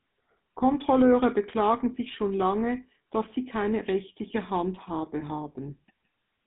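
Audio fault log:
throughout, GSM full-rate codec: the speech has been through the original GSM coder, which rebuilds the voice from a vocal-tract filter driven by a coarse, regularly spaced pulse excitation. Only a thinned-out version of the natural excitation survives, so the voice takes on a plainly audible buzzy, gravelly roughness, consistent with a 13 kbps stream. The band is cut to roughly 150 Hz to 3.6 kHz, with nothing above 3.8 kHz.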